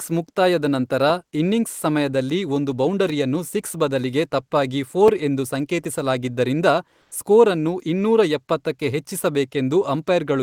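From 7.01 to 7.11 s, about 100 ms of comfort noise stands in for the background: the quiet background, already about 44 dB below the loudest speech, becomes a flat, featureless hiss about 1 dB quieter. The likely cause is Opus-style discontinuous transmission. On a spectrogram, the textured background turns briefly smooth and uniform.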